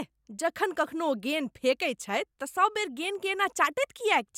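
Nothing in this one trips the ear; the speech just runs along with no technical faults to point at.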